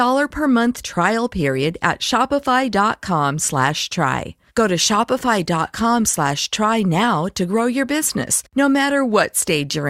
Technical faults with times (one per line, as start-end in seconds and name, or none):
none